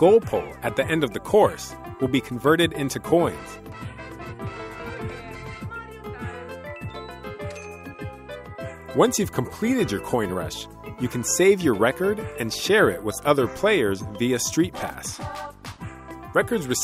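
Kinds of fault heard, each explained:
No faults of any kind can be heard in this clip. Nothing in the sound calls for explanation.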